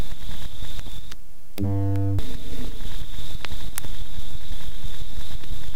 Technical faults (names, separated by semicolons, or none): file header played as audio